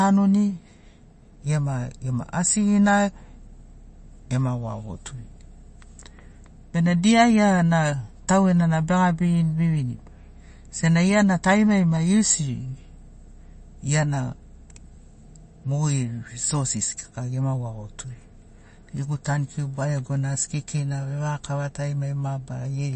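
From the first second to the last, the speech has a watery, swirly quality, and there's nothing at all above 8.3 kHz, so s sounds come out dull and a bit metallic, with consonant attacks smeared. That's likely MP3 compression, and the damage is plainly audible. The encoder ran short of bits, which fits a low bitrate of around 34 kbps, so it cut the treble at a fixed point and let weak frequency lines flicker on and off between frames.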